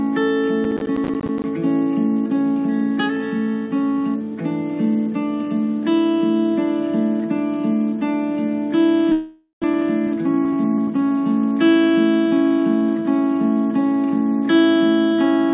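A call-path recording, bandlimited to nothing above 4 kHz, consistent with G.711 mu-law, has three problems. From 0.64 to 1.44 s there's processor overload crackle: a gritty run of tiny silent gaps, which fits around twenty missed buffers of about 10 ms each. At 9.12 to 9.66 s comes a long network dropout, likely from packets arriving late after a delay jump of around 100 ms. The tail gets stretched, about 400 ms goes missing, and there's roughly 100 ms of silence before the audio returns. From 9.74 to 11.26 s the jitter buffer speed-up kicks in, playing at 106% with unchanged pitch and trimming around a tenth of a second to catch up.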